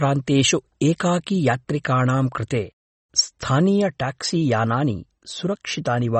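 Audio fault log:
Throughout: MP3 compression. Treble missing above 8.3 kHz, with plainly audible watery artefacts in the speech, likely from a low-bitrate encode that fits about 32 kbps.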